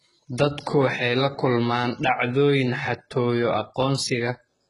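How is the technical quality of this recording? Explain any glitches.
The technical quality is poor, with heavy compression damage across the whole clip.

HE-AAC compression, likely, runs throughout: the lower spectrum is coded sparsely and the treble is rebuilt by copying lower bands upward, so s sounds turn gritty and metallic, nothing remains above 11.1 kHz, and the heavy damage suggests a bitrate around 12 kbps.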